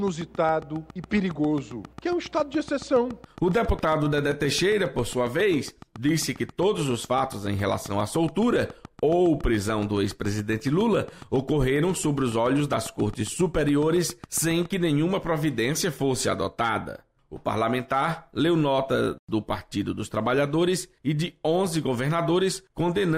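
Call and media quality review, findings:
Train of clicks, 0.08 to 14.66 s. Regular ticking, 7.27 clicks/s, about a hundred in all, peaks roughly level with the programme, audible through pauses. Likely cause: periodic interference pickup or a struggling interface injecting identical pulses. Waveform: evenly spaced, same-shaped spikes. Spectrogram: thin full-band vertical lines at fixed spacing.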